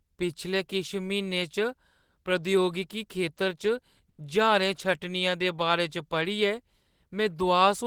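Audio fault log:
4.09 to 4.20 s, short stall from a late packet: a packet arrived late and the jitter buffer ran dry, so the receiver held the last speech sound for about 90 ms, then resumed where it stopped. Nothing is lost, but playback now runs 90 ms later.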